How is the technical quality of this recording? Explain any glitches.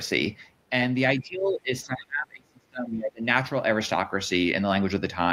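The recording has one clear fault. From 1.17 to 3.25 s there is speech suppressed in double talk. The voice sinks by up to about 30 dB, likely because an echo canceller mistook overlapping talk for echo and attenuated everything. On a waveform the envelope drops sharply.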